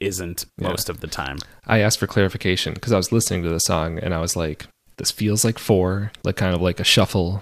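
No technical faults can be heard anywhere in the recording.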